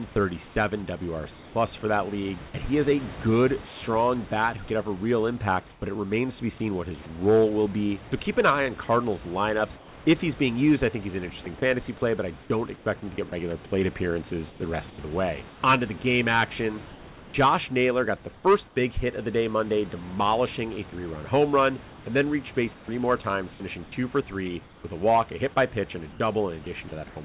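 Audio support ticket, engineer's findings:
Sound chopped by the voice detector, 0.48–3.82 s, 11.44–17.34 s, 20.9–27.16 s. Quiet syllables and word edges swapped for synthetic fill (about 0.5 s, 1.02 s, 0.82 s in total). Likely sender VAD toggling DTX repeatedly.

Comfort noise in place of the background, 5.7–5.82 s, 9.76–10.06 s, 18.68–18.76 s. Real room noise replaced by smoother synthetic noise, about 4, 2 and 6 dB quieter. Likely DTX pause filled with receiver-generated comfort noise.

Call band ends at 4 kHz, which fits G.711 A-law.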